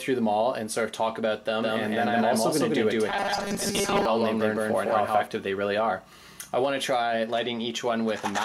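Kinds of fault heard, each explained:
doubled audio track: From 1.63 to 5.27 s a second full-band copy sits about 150 ms behind, roughly as loud as the original, likely from a second path or an out-of-step edit. Unlike an echo or reverb, it has no decay or room colour and begins and ends abruptly.
robotic sound from repeated short buffers: From 3.10 to 4.05 s the sound turns into a rigid, metallic buzz at 200 Hz, which fits 5 ms segments being repeated, likely because new audio arrived too seldom and most of it was skipped. Unlike a steady hum, the buzz only loosely follows the original.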